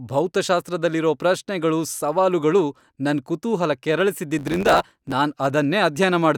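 A block size mismatch with truncation runs from 4.38 s to 5.13 s. One stage hands over blocks longer than the next stage takes in, and the tail of each block is discarded. The speech gains a buzz at about 92 Hz, the rate at which those cut edges recur, and it hurries along 1.07 times faster while keeping its timbre. The pattern fits a writer producing 512-sample blocks.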